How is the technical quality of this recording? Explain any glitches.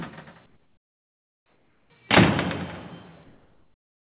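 The quality is limited by two stretches of comfort noise in place of the background, and the whole clip is band-limited, with nothing above 4 kHz, which fits a narrowband call codec.

From 0.46 to 1.9 s, and again from 3.24 s to the end, the real background gives way to a flat, featureless hiss, about 8 dB and then about 3 dB quieter. The likely cause is discontinuous transmission: the sender stopped sending during quiet moments and the receiver filled the gaps with synthetic noise.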